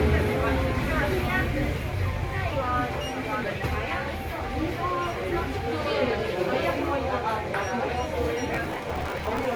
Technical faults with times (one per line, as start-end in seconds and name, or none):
0.00-9.56 generation loss
8.54-9.45 processor overload crackle